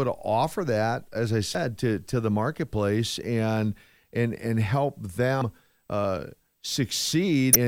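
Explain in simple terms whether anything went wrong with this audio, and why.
Something did go wrong: damaged data in a compressed stream, heard three times in this speech, at 1.52 to 1.55 s, 5.38 to 5.42 s and 7.53 to 7.56 s, each lasting about three hundredths of a second. Part of the compressed file was corrupted, so the player could not read those bits and had to hunt for the next readable chunk. Unlike a simple click from a bad edit, the sound there breaks up briefly into a blip or a gap.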